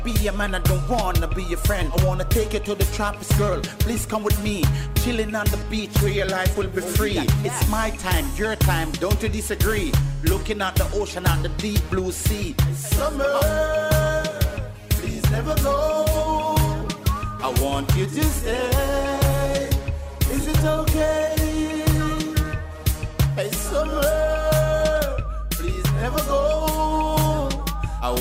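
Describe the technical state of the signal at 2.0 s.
At 2.0 s the signal is intact, with no dropout, distortion, glitch or other technical fault present at that point.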